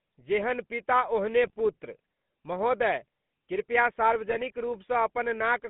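The whole clip carries GSM full-rate codec damage. The speech is buzzy and gravelly, and the band runs only from 150 Hz to 3.6 kHz. That fits the 13 kbps coder.

From 1.47 to 1.54 s, just before "पुत्र महोदय कृपया", GSM bit errors corrupt the decoder's values. The speech breaks into a brief squawk.

From 4.29 to 4.52 s, after "ओहने पुत्र महोदय कृपया", a longer run of bit errors brings gargling and popping.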